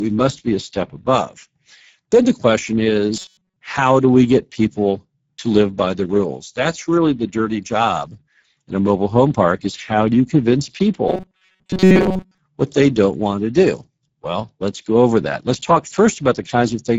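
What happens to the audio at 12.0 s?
Robotic sound from repeated short buffers runs from 11.08 to 12.38 s, between "how do you convince" and "what they don't want". The likely cause is new audio arriving too seldom, so the player loops the last few milliseconds while most of the real signal is skipped. The loop forces a rigid, metallic 188 Hz buzz, which fits a repeat of about 5.3 ms. On a spectrogram this shows as flat, evenly spaced harmonic lines, and the waveform shows one short shape repeating.

The Speex codec at 9.8 kbps also affects this moment, as it does the whole clip. With so few bits for the excitation, this CELP coder leaves the speech plainly hoarse and noisy. A spectrogram shows grainy, smeared texture in place of clean harmonics.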